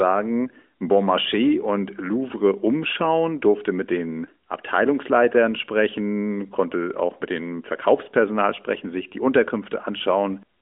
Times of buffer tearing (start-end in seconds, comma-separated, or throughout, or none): none